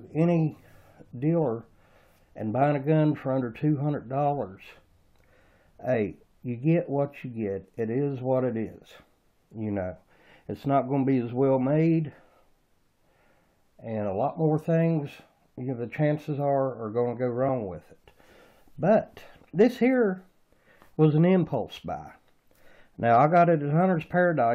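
At 5.93 s and again at 17.47 s, a brief chirp or squawk cuts through the sound, each lasting only about 10 to 15 ms. Both come from damaged data in a compressed stream: corrupted bytes made the decoder misread those frames and lose sync before it found the next valid frame header. On a spectrogram each shows as a thin vertical smear of broadband energy. In the waveform it appears as a short, jagged burst that breaks the surrounding signal.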